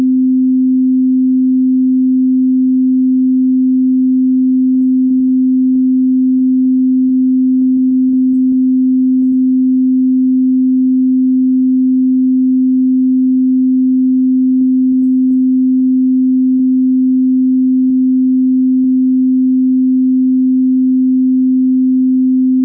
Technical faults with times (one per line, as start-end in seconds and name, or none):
4.74-9.34 repeated packet loss (robotic sound)
14.59-16.61 repeated packet loss (robotic sound)
17.88-18.86 scattered short gaps